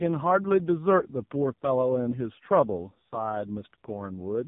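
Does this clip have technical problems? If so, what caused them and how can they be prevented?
Yes. Throughout, the speech has AMR narrowband mobile codec damage: everything above 3.8 kHz is gone, and the voice is heavily buzzy and synthetic, which fits the lowest AMR-NB mode, around 4.75 kbps, starving the vocal-tract model of pulses. Prevent it by recording locally or using a wideband, higher-bitrate link.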